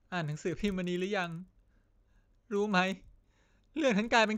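Throughout, a resampler restarted on every block converts 16 kHz to 48 kHz in 40 ms chunks. Each edge ticks, forming a 25 Hz buzz under the speech.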